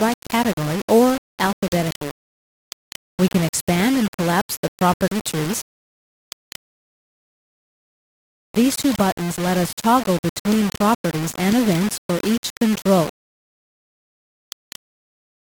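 Grainy distortion runs through the whole clip and changes with the sound. Quiet passages turn gritty, and the softest parts sputter or drop out. The likely cause is low bit depth without dither: rounding to about 4 bits leaves error only roughly 15 dB below the signal.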